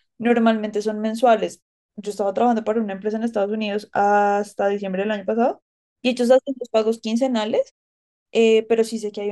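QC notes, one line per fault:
No faults found.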